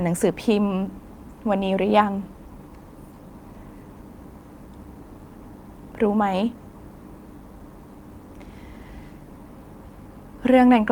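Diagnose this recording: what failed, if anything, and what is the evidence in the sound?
Nothing in the recording stood out as a failure on listening; the speech came across without any audible problem at any stage of the chain.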